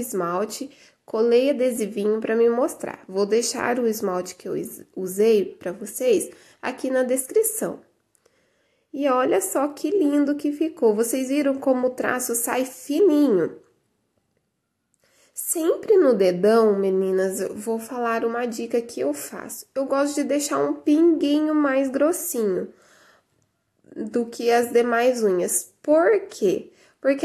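Listening closely, nothing in the audio stood out as a technical problem at any point.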